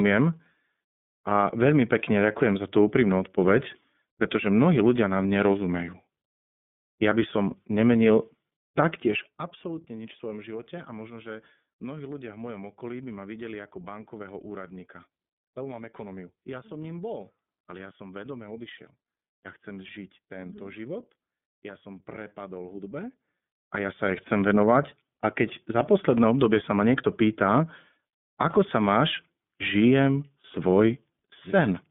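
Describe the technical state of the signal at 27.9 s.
At 27.9 s the speech carries iLBC codec damage, present through the whole clip rather than at that instant alone. The codec codes each 30 ms frame's excitation on its own, without reference to the previous frame, which fits its 13.33 kbps mode. The line passes only about 150 Hz to 3.5 kHz, so the voice sounds thin and boxy. The coding roughness is plainly audible, giving the speech a slightly buzzy, synthetic edge.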